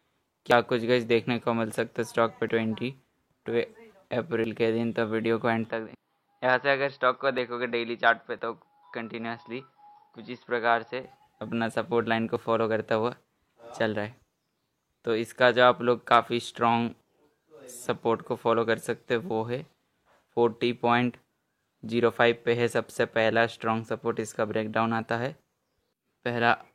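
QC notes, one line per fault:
0.51, 2.49, 4.44, 7.38, 8.39 and 12.36 s, overlap between stream segments: overlapping time stamps make the player discard sound that was never actually duplicated, dropping roughly 15 to 30 ms each time, so the waveform jumps and a click or tiny skip is heard, spaced in a way that fits 1-second segments.
5.69–11.04 s, input switched to a poorer device: the input likely changed to a lesser microphone or headset profile, cutting everything above 5.6 kHz and dropping the level a few dB, with faint new background noise, so the sound turns dull and boxy with no silence at either switch.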